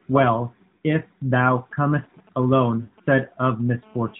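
At 2.82 s the speech breaks up for about a tenth of a second, a case of lost AMR speech frames. Radio errors corrupted a short run of frames, about 60 ms of audio, which fits three 20 ms frames. The decoder filled the gap by repeating the last good pitch and vocal tract settings at falling gain. The sound stretches, sags in level, then recovers roughly by 2.92 s, all within the narrowband AMR sound, which carries nothing above 4 kHz. The stretched, fading tone sets it apart from a plain dropout, which cuts straight to silence.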